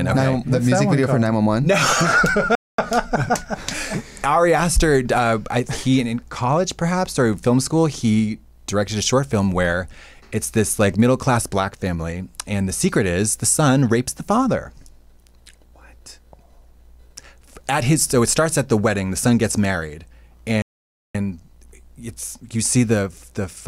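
At 2.55 s the sound cuts out for about 230 ms and resumes at 2.79 s. At 20.62 s a longer gap of about 525 ms follows, ending at 21.15 s. Both are playback stalls, likely the player starving for data or its thread blocking, so output fell silent mid-flow until recovery.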